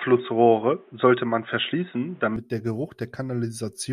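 Speech, with an input switched to a poorer device for the opening stretch: from the start to 2.36 s the sound is band-limited, with nothing above 3.8 kHz, so it comes across dull and boxy. It also carries its own background noise, around 35 dB below the signal, and sits at a level roughly 5 dB different. At 2.36 s the full bandwidth returns abruptly, with no gap, which is likely a change of capture device mid-recording.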